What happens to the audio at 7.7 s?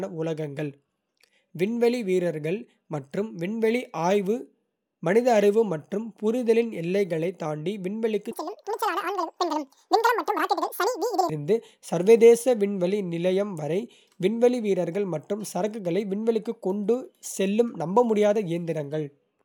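Nothing goes wrong at 7.7 s; the speech continues cleanly through that moment, with no dropout, click or distortion to be heard.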